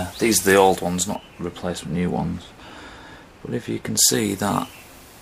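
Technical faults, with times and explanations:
1.15 to 3.97 s, de-emphasis applied wrongly: a treble cut meant to undo pre-emphasis landed on audio that didn't need it, so the top end slopes away smoothly to about 14 dB down at 10 kHz, leaving the sound dull and muffled until it clears.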